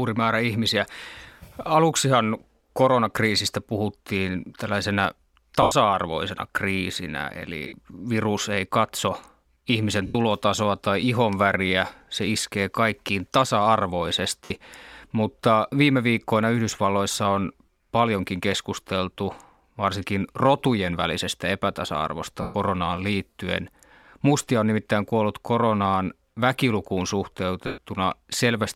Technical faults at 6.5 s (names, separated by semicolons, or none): none